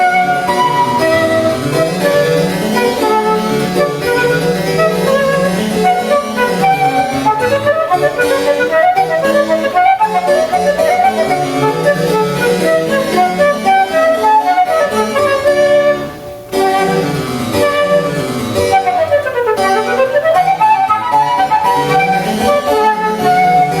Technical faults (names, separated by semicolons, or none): gain pumping